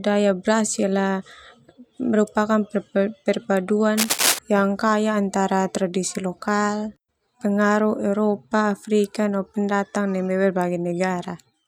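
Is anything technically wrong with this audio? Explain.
Yes. From 3.96 to 4.39 s, just before "yang kaya antara tradisi", the speech is covered by cable scratch noise, a dense, ragged burst of scratching and rustling about as loud as the speech itself. The likely cause is a worn cable or connector being moved, with its contact resistance jumping around rapidly. Unlike a single click or a steady crackle, the noise is a brief, irregular cluster that starts and stops with the handling.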